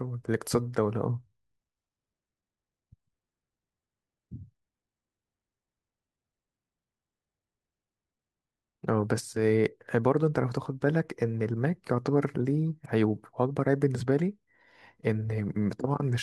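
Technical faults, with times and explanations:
Nothing technical to flag in this speech recording; no faults turn up anywhere along the way.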